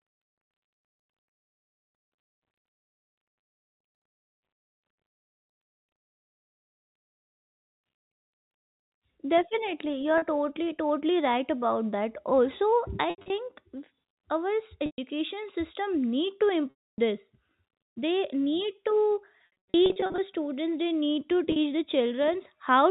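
Packet loss with pitch repetition occurs at 10.18–10.22 s (before "totally totally right about"), 13.1–13.3 s, 14.86–14.98 s, 16.7–16.98 s, 19.38–20.18 s (before "students they need to") and 21.52–21.56 s (after "students they need to"). Lost speech is bridged by repeating the last pitch period. The 40 ms gaps sound briefly held and buzzy, while the 280 ms gap fades toward silence. Across the G.711 telephone band, the losses at 13.1 s and 19.38 s are scattered, over 200 ms and 800 ms.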